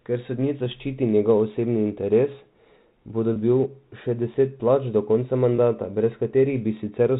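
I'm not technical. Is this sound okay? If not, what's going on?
No, there are two problems.

Block size mismatch (truncated) runs through the whole clip as a steady buzz at about 100 Hz, meaning 100 small clicks every second. One step in the audio chain hands over chunks of sound slightly longer than the next step accepts, so the end of every chunk gets cut off. Those regular cuts make the buzz. The speech still plays at its normal speed and pitch.

Packet loss with pitch repetition causes three brief hiccups, at 0.65 s, from 3.33 to 3.36 s, and from 5.56 to 5.58 s. Small pieces of sound went missing in transmission, about 10, 30 and 20 milliseconds long. Each time, the receiver covered the gap by repeating the last tiny cycle of the voice, so you hear a quick, slightly held, buzzy sound, like the voice briefly sticking.

The audio comes through a standard telephone line format, which limits it to the familiar narrow phone sound.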